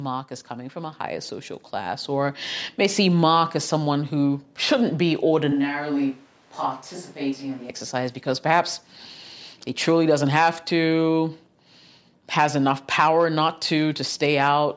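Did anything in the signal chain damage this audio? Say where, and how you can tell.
Yes. The first fault sits in the call processing stage, where the automatic gain rises. Between 0.47 and 3.06 s the gain control decided the input was too quiet and pushed its gain up by 9 dB over roughly two and a half seconds. You can tell it's gain and not the talker getting louder because the speech and the background noise swell together at the same rate across that span.

The second fault is a switch to a distant microphone, from 5.52 to 7.69 s. Right after "someone who shouldn't be" the sound abruptly turns hollow and roomy, loses bass, drops by around 5 dB, and picks up room noise only about 30 dB below the speech. It snaps back just as suddenly before "exercise because perhaps". The capture stage likely lost the close microphone's feed and fell back to a farther one.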